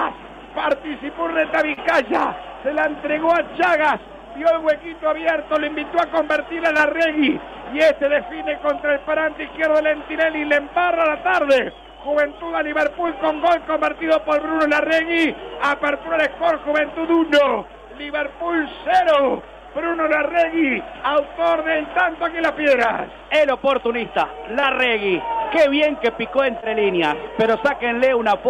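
Short concealed packet loss occurs at 1.73, 6.77, 10.48, 13.06, 19.92, 24.6 and 26.60 s. Each time, a 20 ms stretch (40 ms at 1.73 s) failed to arrive for decoding. The receiver stretched the preceding sound across the hole and blended back, leaving brief smears or wobbles.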